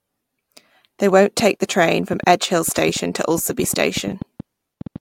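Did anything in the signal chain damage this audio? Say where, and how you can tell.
Yes. From 1.4 s to 4.97 s a train of clicks runs over the speech: about twenty sharp, near-identical ticks at an average of 5.3 per second but unevenly spaced, continuing through the pauses and peaking about 5 dB above the speech itself. Because the pulses share one shape and ignore what is being said, they come from outside the program material, likely interference coupling into the analogue wiring from nearby equipment or a faulty connection or power supply.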